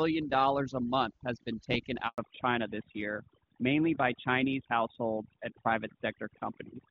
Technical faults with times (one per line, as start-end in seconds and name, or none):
0.00-6.91 overdone noise removal
2.08-2.18 handover gap
2.18-6.91 fallback to narrowband